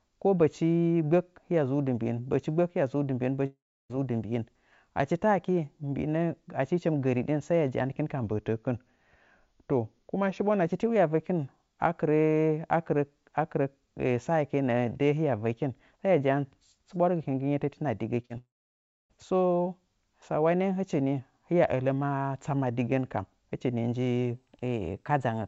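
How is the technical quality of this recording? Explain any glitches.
The recording carries several clear network and timing faults over a call path whose bandwidth stops at 8 kHz, which fits G.722 at about 64 kbps.

Long network dropout, 3.46–3.91 s and 18.38–19.11 s: a stretch of audio likely never arrived, so the receiver extended the last sound as a fading buzz and then fell silent for about 0.32 s and 0.62 s. Roughly 0.44 s and 0.72 s of speech are simply gone.

Drift correction step, 8.23–10.65 s and 24.34 s to the end: clock-matching software likely changed playback rate in one jump to rebalance its buffer. The first slows speech 6.24% and drops pitch 112 cents, then snaps back; the second speeds it 6.24% and raises pitch 105 cents.

Short concealed packet loss, 18.22–18.26 s and 18.26–18.32 s: back-to-back packets arrived too late, so the decoder synthesised continuations of the preceding sound and blended back. 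The result is a brief smeared wobble just before the second dropout.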